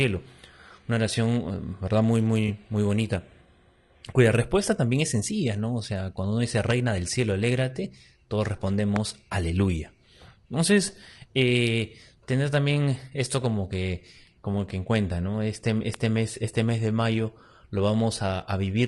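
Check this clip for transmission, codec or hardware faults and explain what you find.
Three kinds of fault are present in this speech recording: a low-bitrate codec running throughout, two brief dropouts, and three sharp pops.

Low-delay AAC compression, throughout: the encoder's short frames likely resolve voice harmonics poorly at a bitrate near 32 kbps, so the speech sounds plainly rough and grainy, with noise between the harmonics.

AAC frame loss with concealment, at 2.47–2.50 s just before "muy bonita" and at 11.89–11.92 s: about 20 ms of coded audio went missing each time. The decoder patched the gap from the previous spectrum, leaving a short smeared, noisy blip.

Loud pop, at 6.71–6.73 s after "sea cuando uno dice", at 8.96–8.98 s after "del cielo alégrate todos", and at 15.94–15.96 s: a sudden voltage step or pulse, likely from a connector, switch or static discharge, entered the signal path. 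Each is heard as a single sharp pop, about 15, 20 and 15 dB above the speech respectively, while the speech continues underneath.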